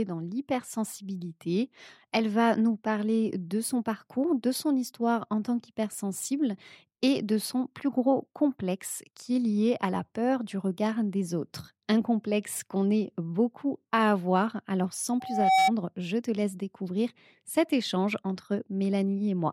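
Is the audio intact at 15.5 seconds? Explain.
No. Loudspeaker feedback squeal runs from 15.20 to 15.72 s, before "je te laisse découvrir". A 763 Hz loop tone swells over about 0.4 s, peaking about 5 dB above the speech.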